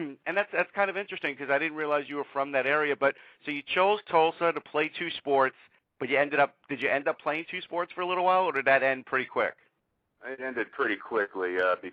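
No technical faults can be heard at any point in the audio.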